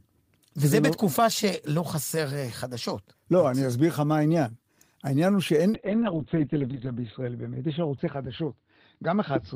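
From 5.75 s to the end of the speech, a call bitrate drop takes hold: the encoder falls from 32 to 9 kbps, lowest for about 1.2 s, and audio bandwidth shrinks from 20 kHz to 4 kHz. The result is muffled, watery coding. The change is sustained, unlike packet loss's brief dropouts.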